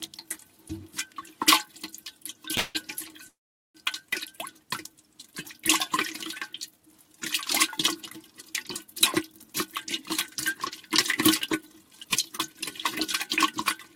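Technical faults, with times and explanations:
2.57 to 2.77 s, call audio freeze: the sound stalls and its last moment is stretched into a fading buzz for about 170 ms, likely because the jitter buffer ran empty. On a spectrogram it shows as a smeared horizontal band, then the audio resumes with nothing lost.
3.28 to 3.77 s, call audio freeze: the stall lasts about 460 ms, a brief fading tail and then about 430 ms of silence, likely from late packets. The waveform goes flat before the sound picks up where it stopped.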